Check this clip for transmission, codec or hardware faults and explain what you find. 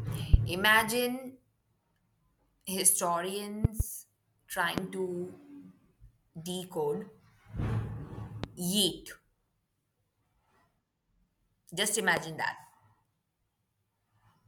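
There's one kind of fault here, showing up five times: a loud pop over the speech, at 0.34–0.36 s, 3.65–3.83 s (a quick double), 4.78–4.81 s, 8.44–8.46 s and 12.17–12.20 s. Each is a sharp thump standing well above the speech, the first one hardest, while the talking carries on underneath. It's likely a sudden voltage step from a connector, switch or static discharge, which the following circuitry turns into a pulse.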